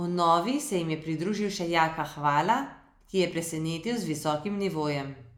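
Overlap between stream segments at 3.31 s, just after "ki je", in this speech recording: two segments' time stamps overlapped, so the player discarded roughly 18 ms of audio that was never actually duplicated. The waveform jumps across the gap, heard as a brief click or skip.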